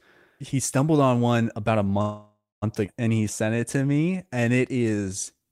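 A speech clip with three network-related faults, in close succession. At 2.01 s, just after "on one about a", the sound freezes until 2.64 s. The last sound is drawn on as a fading buzz, and the final stretch of about 210 ms goes silent. This is a call audio freeze, likely from packets held up in transit while the jitter buffer ran empty. The receiver filled about 0.6 s. Speech then resumes where it stopped. Nothing is lost, but the delay grows by that same amount. At 2.86 s comes a skip ahead. Playback jumps forward with only a tiny 14 ms join, ending at 2.89 s. Around four tenths of a second of speech is simply gone. The two sides butt together almost directly. This happens when a stretch is dropped while later audio is already queued, for example when an overfull jitter buffer discards it. Here it cancels much of the delay the freeze had added. From 3.14 s to the end, a jitter buffer slow-down sets in. 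Speech plays at about 89 percent speed but keeps its pitch. Sounds are drawn out, with a slight warble in places. The buffer is rebuilding its reserve by repeating single pitch periods and bits of pauses many times over. In total it adds 281 ms.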